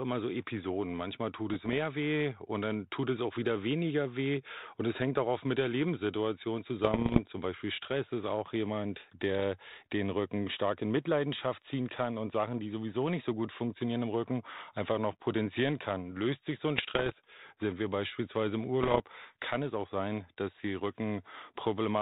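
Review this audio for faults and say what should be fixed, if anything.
Pops and rough, gritty bursts with brief jumps in level break up the speech at 1.50–1.80 s (just before "weh und dann tut"), 6.84–7.22 s, 16.78–17.12 s (between "sich so ein" and "sind wir beispielsweise im") and 18.83–19.02 s (just before "kann es auch sein"). These are bit errors on an ADPCM link. The link's band-limited sound points to 32 kbit/s G.726 as on a cordless phone. Each flipped bit knocks the decoder's step size and predictor off track, so the damage smears on for some milliseconds instead of staying a single click. The error rate is around half a percent in the first burst, about 0.7 percent in the next two and nearer 2 percent in the last. To prevent it, improve the radio link between handset and base (closer range, less interference) or use a link with error protection so corrupted frames are concealed rather than decoded.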